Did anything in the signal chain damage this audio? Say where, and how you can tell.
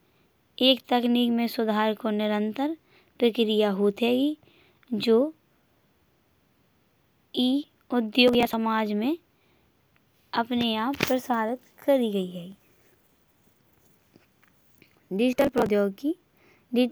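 Yes. Processor overload crackle appears at 8.28 to 8.54 s, again at 12.52 to 13.53 s just after "आप प्रचारित करी गई", and at 15.33 to 15.69 s. These are bursts of gritty tearing over the speech. This is a driver or buffer-stage fault. The processor missed one deadline after another for short buffers of around 10 ms, and each missed buffer was skipped. The result is a dense run of tiny hard-edged gaps, roughly 20 to 70 per burst, that stop as soon as the load eases.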